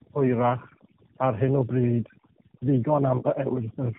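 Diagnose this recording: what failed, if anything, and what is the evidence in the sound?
Overdone noise removal at the call-processing stage runs through the whole recording. The background drops and breaks up, leaving twinkling specks. A suppressor set too aggressively is pulling individual frequency bands down whenever they sit close to its noise estimate, so the quieter parts of the speech go with the noise. A low-bitrate codec alone would roughen the speech but would not gate the background into sparkling residue.

Tandem speech coding, a codec-stage fault, is also present from start to finish. The speech is rough, muffled and warbly, with nothing above 3.8 kHz, and the coarseness exceeds what one narrowband coder would produce. The sound points to two AMR-NB passes, around 8 and then 10 kbit/s, joined through a G.711 link. Each coder re-encodes the previous one's degraded output. 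A simple band limit would only dull the speech, but here the warble and graininess compound.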